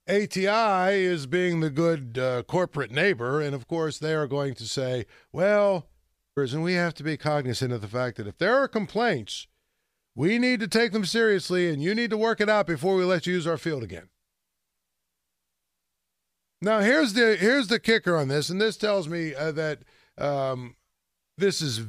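At 6.37 s the speech jumps abruptly forward with a brief blip. This is likely a stream segment skipped, where one chunk failed to load and playback resumed at the next. The waveform shows a hard splice, and a thin broadband vertical line marks the spectrogram.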